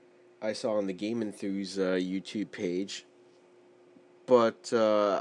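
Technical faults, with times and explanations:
No technical faults can be heard in this clip.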